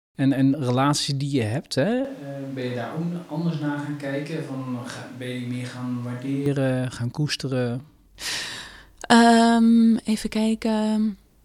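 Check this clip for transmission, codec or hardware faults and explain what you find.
One fault found. From 2.05 to 6.46 s, starting just before "gaan koesteren", speech abruptly turns hollow, bass-light and about 5 dB quieter with more room noise: likely a switch to a distant microphone after the close one dropped out.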